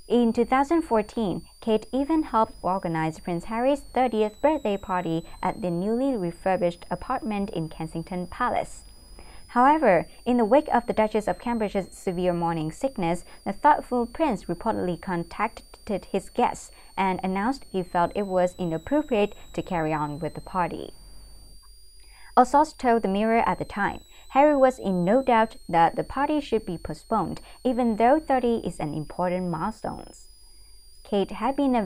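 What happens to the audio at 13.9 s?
At 13.9 s the switching supply whistle persists, as throughout: a power supply's audible switching leaks in as a high tone near 5 kHz, drifting between 3.8 and 5.2 kHz, roughly 30 dB below the signal.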